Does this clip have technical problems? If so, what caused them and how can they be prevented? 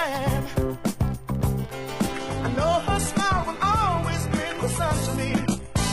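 Yes. From 2.11 s to the end, an adaptive stream at a lower bitrate: the treble stops near 11.8 kHz, which fits a step down to low-bitrate HE-AAC. Unlike a dropout, the quality changes suddenly with no gap. A steadier connection or a larger playback buffer would prevent the switch.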